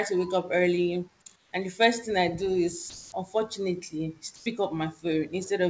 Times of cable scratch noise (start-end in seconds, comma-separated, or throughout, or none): none